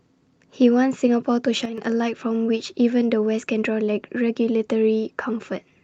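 At 1.65 s the speech and the background noise under it drop together by about 8 dB in an instant, with no fade, and stay low until 1.78 s, when they snap back just as abruptly. This sudden gain jump sounds like a brief step down in level rather than a natural softening of the voice. The likely cause is a digital gain change applied between one sample and the next without a ramp, then reversed the same way.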